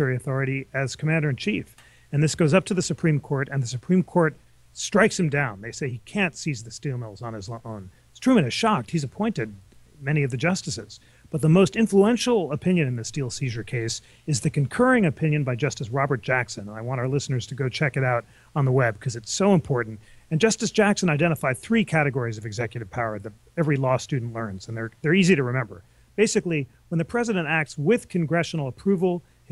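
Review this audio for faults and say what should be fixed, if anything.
Nothing here needs fixing; no faults are audible.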